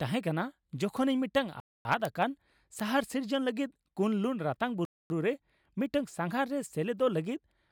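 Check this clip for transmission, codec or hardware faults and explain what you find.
Two kinds of fault are present in the speech: isolated bit error spikes and regular gaps between chunks.

Bit error spikes occur at 0.97 s, 2.05 s and 2.80 s. Each is a single corrupted sample, where one flipped bit in memory or on a digital link pushed the value up or down by a power of two before it snapped back. Each is heard as a sharp, dry tick that has nothing to do with the speech around it. On a waveform, each is a one-sample needle standing out from the trace. On a spectrogram, it is a thin vertical line running through all frequencies.

Gaps between chunks fall at 1.60–1.85 s and 4.85–5.10 s, each a 250 ms silence. The sound between them runs for 3 s, which points to audio delivered in 3-second chunks, with dead time inserted at each join by padding or by a player starting each chunk late. The speech isn't cut short, but it is abruptly held and then resumes. 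The waveform drops to a flat line with hard edges, and the spectrogram shows a clean, empty vertical band at each join.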